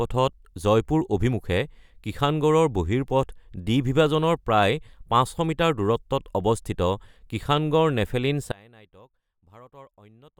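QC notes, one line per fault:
8.52–10.40 s: one channel inverted, likely; in mono the speech drops by about 28 dB as the shared centre cancels, leaving a faint residue.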